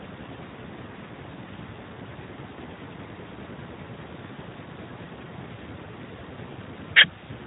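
From start to end, the speech carries Speex codec damage. The band stops near 3.8 kHz, so it sounds narrow and muffled. Too few bits reach the excitation, which fits a rate near 11 kbps. Voices turn hoarse and noisy.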